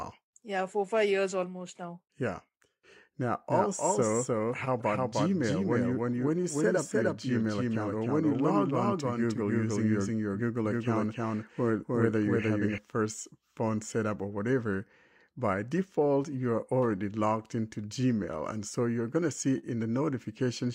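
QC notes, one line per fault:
3.48–12.78 s, doubled audio track: A second full-band copy of the speech runs about 0.3 s behind the original, at roughly the same level. It has no decay and no added room sound, so it is a clean duplicate rather than reverb. It starts and stops abruptly at the edges of this span. The likely cause is the same signal being captured twice, once through a slower path, or an edit leaving two copies out of step.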